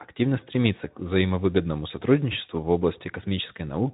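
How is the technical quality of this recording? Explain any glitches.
No glitches or faults can be heard in this speech recording. It is carried by the Speex codec, with only a light codec coarseness that fits a bitrate of around 15 kbps and a band that stops at about 3.8 kHz.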